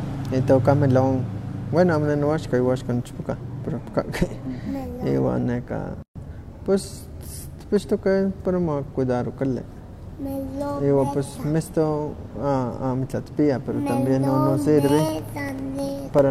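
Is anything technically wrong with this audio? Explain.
Yes, the speech has two faults.

A gap at a join of encoded pieces runs from 6.02 to 6.16 s: a silence of about 130 ms with smeared edges. Two separately encoded segments were joined without trimming the encoder's start delay and end padding, so the speech stops dead and then resumes where it left off.

Periodic USB or driver dropouts occur from 14.89 to 16.19 s. Every 0.1 s a background task stalls the audio path, and a couple of milliseconds are replaced by silence. That gives about fifteen evenly spaced ticks, heard only while speech is present.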